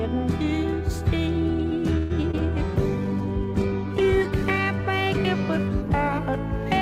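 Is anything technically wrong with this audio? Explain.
Yes, three kinds of network fault occur in quick succession.

From 1.97 to 2.12 s there is a call audio freeze: the last sound is stretched into a fading buzz or hiss for about 125 ms, and the audio then resumes exactly where it left off, now running that much later. Nothing is skipped, which separates it from packet loss. The cause is likely a delivery stall that emptied the jitter buffer, so the receiver had to improvise until packets arrived.

Short concealed packet loss follows at 2.22 to 2.25 s and again at 2.31 to 2.47 s. Each time about 20 ms of real audio never arrived and was replaced by an extrapolation of the preceding sound, heard as a brief smear or wobble; the second patch also lengthens the timeline slightly. Unlike the freeze, genuine material is missing here, and the filler is far shorter.

From 2.76 to 4.66 s comes a call bitrate drop, with the encoder pushed from 64 kbps down to 11 kbps and held at the bottom for about 1.8 s. 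The sound turns coarse, watery and dull as high frequencies are cut away, then clears when the rate recovers. This is a sustained change in texture rather than a momentary glitch, which distinguishes it from both preceding faults.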